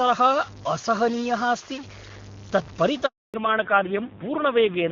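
A data bit, likely stuck at a fixed value throughout the clip, pushes many samples off by its weight, giving distortion and a noisy hiss filling the pauses. From 3.06 to 3.34 s, a handover gap occurs as the call switches networks and no speech frames arrive, so the sound fades quickly into 280 ms of silence. From 3.34 s to the end, the call falls back to narrowband, dropping from HD Voice at 23.85 kbit/s to AMR-NB at 5.9 kbit/s. Everything above 4 kHz disappears, and the voice becomes duller and rougher than the clear wideband sound before the switch.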